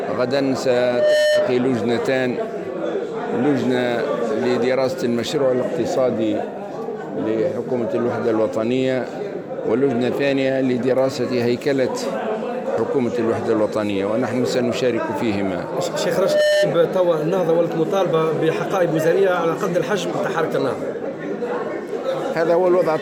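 Loudspeaker feedback squeal occurs twice, from 0.67 to 1.63 s and from 16.14 to 16.73 s, both times as a single tone at 601 Hz. A microphone is hearing the loudspeaker it drives, and at that frequency the loop gain tops unity, so the tone feeds on itself. The first swells over roughly half a second and the second over roughly a third. Each peaks around 5 dB above the surrounding sound before the loop breaks.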